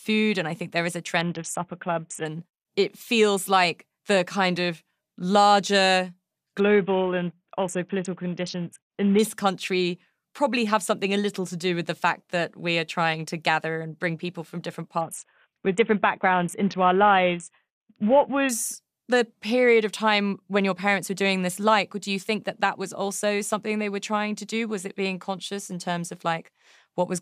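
Speech with a Bluetooth SBC bit pool drop at 1.21–2.25, 6.6–9.19 and 15.01–18.49 s. Treble dulls and gritty noise rises, fitting a fall to roughly 54 kbps, unlike dropout gaps.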